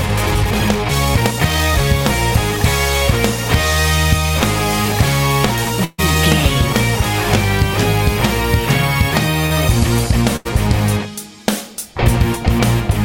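The audio opens with a time-stretched section from 0.0 to 1.8 s, running about 1.66 times fast at unchanged pitch, choppy and rushed, likely from software dropping short pieces to fit a length. A burst of packet loss at 5.84 to 6.00 s holds and fades the last sound for about 137 ms, then resumes with roughly 140 ms missing. A second burst at 10.36 to 10.47 s behaves the same way, with about 88 ms of fill and 80 ms gone. Short concealed packet loss at 9.46 to 9.52 s patches a 40 ms hole by extending the preceding sound, leaving a brief smear before the real audio returns.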